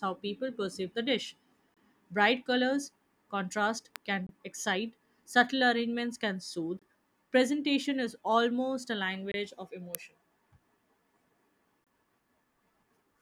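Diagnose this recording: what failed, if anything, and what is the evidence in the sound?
Gap between chunks at the storage or playback stage: hard-edged 25 ms holes at 1.74, 4.27, 6.79, 9.32 and 11.84 s, about 2.5 s apart. One comes right after "people perceive the dish", another between "colors contrast" and "excite subtle arrangements can". Each chunk plays intact, but silence is left at the join. The waveform shows flat near-silent strips with abrupt edges, and the spectrogram shows narrow blank vertical bands.

Electrical switching spike in the analogue wiring: sharp snaps at 3.96 s and 9.95 s sit on top of the sound. The likely cause is a nearby switch or discharge coupling into the line. Each appears as a very brief vertical spike in the waveform and a thin full-band vertical line on the spectrogram.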